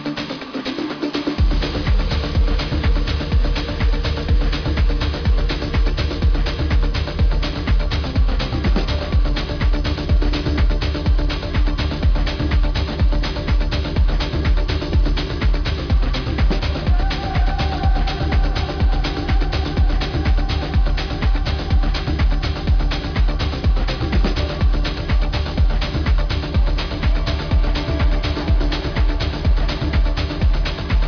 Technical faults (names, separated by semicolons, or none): aliasing